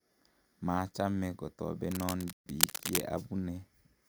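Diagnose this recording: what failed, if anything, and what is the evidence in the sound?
In the analogue wiring, a worn cable or connector was likely being moved, so its contact resistance fluctuated rapidly. From 1.91 to 3.01 s, dense, uneven cable scratch noise rustles over the speech at roughly the same loudness as the speech itself.

At the playback stage, the player likely ran out of data or had its thread blocked. This playback stall silences the output from 2.33 to 2.46 s, a gap of about 130 ms that cuts the speech mid-flow inside the scratching before the sound resumes.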